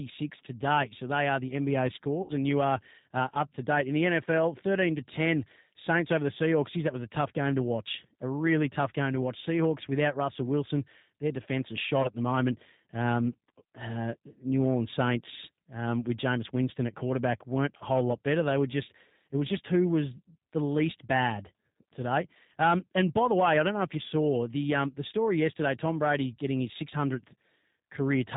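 A speech recording that has passed through the G.729 codec for its whole length. Nothing above 4 kHz survives, and the voice has a rough, slightly synthetic grain that fits an 8 kbit/s G.729A stream. That grain comes from the codec rebuilding each 10 ms frame from a vocal-tract filter, a pitch predictor and a few pulses. A plain 4 kHz low-pass would be muffled but clean, so the roughness is what marks this as the codec at work. Three short gaps from VoIP packet loss are concealed by the speech codec. At 2.22–2.34 s, just before "and you are uh", about seven 10 ms frames are lost. At 12.03–12.10 s, between "their defense is shot" and "the moment", the loss is brief, roughly two frames. At 17.77–17.85 s, after "at quarterback weren't" and before "whole lot better", about four frames are lost. A simple dropout would leave silence or a click, but here the decoder stretches its last pitch and filter into a fading buzzy tone or coloured noise. 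The voice then stays weak or distorted for tens of milliseconds or more after each gap, because each new frame builds on the damaged one before it.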